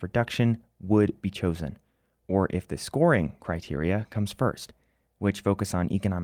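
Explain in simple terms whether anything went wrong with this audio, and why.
Nothing went wrong with this speech recording: no technical faults can be heard anywhere in it.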